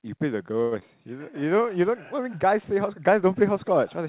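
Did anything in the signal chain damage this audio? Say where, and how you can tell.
Yes, at the network and jitter-buffer stage of the call path. The G.711 mu-law path, with nothing above 4 kHz, is heard as its band limit and its usual coding noise. The damage comes from packets arriving late or not at all.

A short stall from a late packet runs from 0.62 to 0.73 s. A sound is held for about 94 ms with a slight buzzy sustain, then the speech resumes exactly where it stopped, with nothing skipped. The buffer ran dry, so the receiver stretched its last output until the delayed packet turned up. That pushed playout delay back by 94 ms.

A short concealed packet loss follows at 0.79 to 0.83 s. About 60 ms of audio never arrived in time, but only about 19 ms was synthesised to bridge it. That produces a brief smear and a jump forward rather than a gap. Dropping that material pulls the playout delay back by roughly 40 ms.

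A jitter buffer slow-down covers 1.40 to 1.70 s. Pitch stays put while the speech drags to about 88% speed, with sounds audibly drawn out. The receiver was rebuilding its reserve by repeating single pitch periods in a row. That added 42 ms of playout across the stretch.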